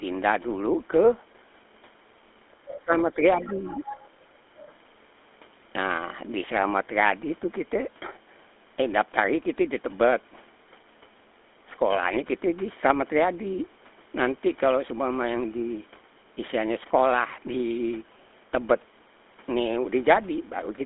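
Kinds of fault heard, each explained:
GSM full-rate codec: speech runs through the old GSM full-rate codec, which fits a 13 kbps mobile call, leaving a buzzy, gravelly roughness within a 250 Hz to 3.5 kHz band.
Other side's voice leaking through: at 2.52 to 2.8 s and 3.42 to 4.05 s a second voice sits about 15 dB down, likely loudspeaker echo the canceller missed.
Speech suppressed in double talk: from 2.78 to 3.18 s the talker dips by roughly 20 dB in pieces, likely the echo canceller ducking both voices during overlap.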